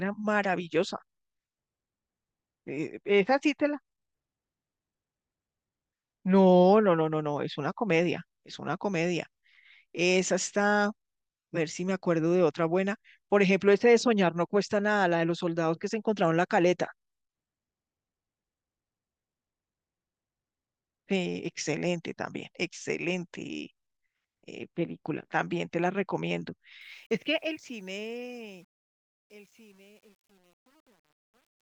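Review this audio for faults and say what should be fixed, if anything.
Truncation distortion on the fade-out runs from 26.81 s to 31.62 s, worst after 27.82 s. The stage fits a 9-bit path without dither, so falling speech breaks into coarse steps. Unlike gate chatter, the grit worsens as level drops. Fading at high resolution with dither prevents it.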